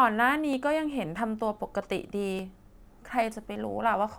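Speech with two abrupt forward jumps, at 0.53 s and 2.39 s, skipping about 20 ms and 10 ms: likely a dropped buffer (overrun), with lost samples spliced out.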